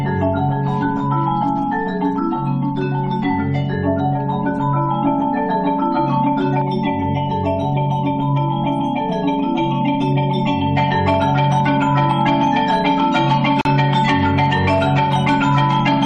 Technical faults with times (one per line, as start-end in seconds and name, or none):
6.62-10.77 channel delay (comb filtering)
13.61-13.65 gap at a join of encoded pieces